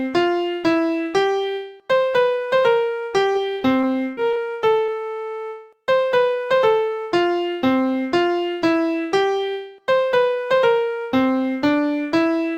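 The audio has two packet-loss faults close together. From 3.33 to 4.38 s there is repeated packet loss (robotic sound): six separate gaps, the longest 41 ms, with 140 ms missing in total and about 125 ms of that patched. The receiver fills each hole by carrying the preceding sound forward, so about 12% of that second is synthetic continuation, cut up by real audio. This produces a choppy, broken texture. On a spectrogram the stretch shows a run of short blocks where the spectral pattern freezes or smears instead of evolving, each ending at an abrupt seam. The waveform shows small repeated or flattened segments at those points. Shortly after, from 4.86 to 4.90 s, there is a short concealed packet loss. About 20 ms never arrived and was filled by extending the last sound, either from its pitch or as shaped noise, before blending back into the real signal. It is heard as a brief smear, and it appears as a narrow smoothed patch in the spectrogram with a subtly repeated stretch in the waveform.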